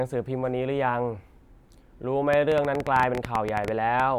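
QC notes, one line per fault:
2.33–4.01 s, train of clicks: roughly twenty sharp, similarly shaped pulses arrive at an uneven pace averaging 10.8 per second, ticking over the speech and through its gaps. Their peaks sit around 15 dB above the surrounding signal, so they stand out as brittle pops rather than blending in. The repeating pulse shape points to something injecting short spikes into the signal path, likely electrical interference from nearby equipment or a faulty connection or power supply.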